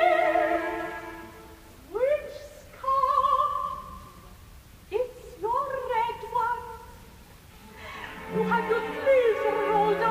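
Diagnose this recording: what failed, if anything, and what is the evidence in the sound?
Nothing here points to a failure at any stage, as the audio runs steady and even with no break, glitch or distortion to trace back to a cause.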